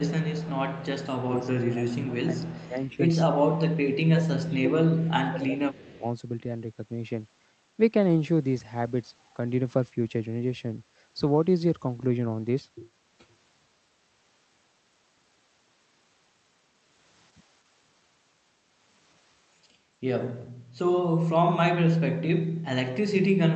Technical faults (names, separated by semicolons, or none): speech suppressed in double talk; echo leak